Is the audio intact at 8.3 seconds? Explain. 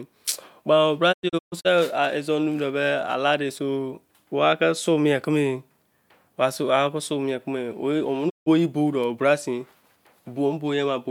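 No: a digital broadcast dropout mutes the speech from 8.28 to 8.48 s. Failed frames trigger a 20 ms fade into true silence, unlike a hard click-edged cut, and that speech is lost.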